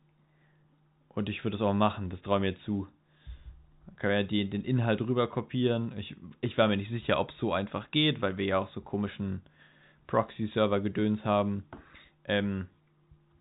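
There are no technical faults to describe in time order in this speech clip, which comes through the G.711 telephone coding with nothing above 3.8 kHz.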